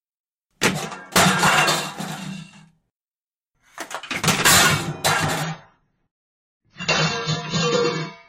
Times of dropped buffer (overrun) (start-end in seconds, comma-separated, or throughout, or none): none